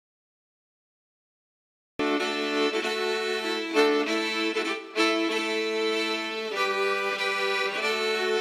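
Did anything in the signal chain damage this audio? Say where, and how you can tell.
Yes, there's a cut-off start at the capture or recording stage. The first 1.99 s are pure digital silence, and then at 1.99 s the sound just appears already in progress, with no natural attack or fade-in leading up to it. That abrupt jump from silence into the middle of a sound tells you recording kicked in late, so whatever came before 1.99 s was never captured at all.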